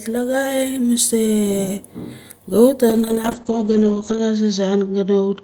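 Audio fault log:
2.9–5.43 s, call bitrate drop: the encoder lost most of its bitrate, consistent with 32 falling to 8 kbps, so speech turns coarse and watery, with highs cut above 8 kHz.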